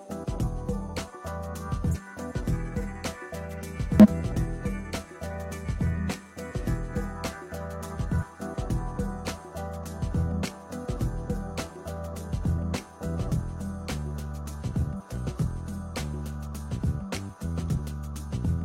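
Damaged data in a compressed stream produces brief glitches at 1.91–1.96, 4.00–4.06, 8.18–8.24, 14.96–15.02 and 17.74–17.78 s. At each, the decoder misreads corrupted frames, loses sync and hunts for the next valid header, leaving a disturbance of roughly 40 to 60 ms.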